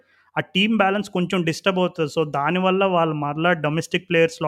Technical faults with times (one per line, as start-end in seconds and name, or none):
none